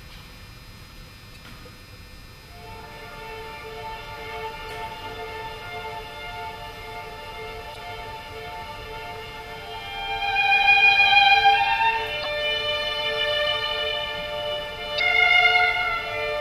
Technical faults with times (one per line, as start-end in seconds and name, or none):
1.32-1.37 damaged data in a compressed stream
4.67-4.71 damaged data in a compressed stream
7.72-7.77 damaged data in a compressed stream
12.21-12.26 damaged data in a compressed stream
14.96-15.00 damaged data in a compressed stream